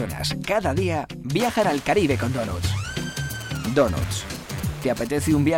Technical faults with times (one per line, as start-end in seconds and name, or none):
3.18-5.07 GSM signalling bursts
5.22-5.53 GSM phone buzz